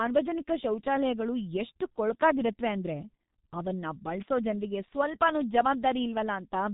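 From start to finish, the speech carries the sound of the G.723.1 codec. Nothing reaches above 3.8 kHz, so the top of the spectrum is simply gone. The voice sounds muffled and boxed in. The damage is heavy. The codec rebuilds speech from a coarse model updated only every 30 ms, so quick changes get smeared. Consonants blur together. Vowels take on a rough, hoarse edge. This degree of loss fits a rate near 6.3 kbit/s.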